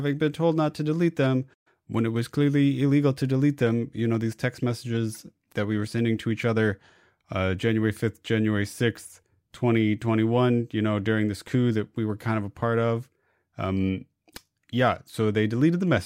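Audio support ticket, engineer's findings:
Playback stall, 1.53–1.67 s. Speech cuts out mid-flow into roughly 120 ms of silence, then resumes. Likely cause: player buffer underrun or a blocked audio thread.

Corrupt frame decoded, 5.12–5.17 s. Brief chirp-like burst of misplaced energy peaking around -25 dBFS, spanning about two codec frames. Decoder played bit-flipped frames, misreading gains and codes. Distinct from a click: frame-length, not a single impulse.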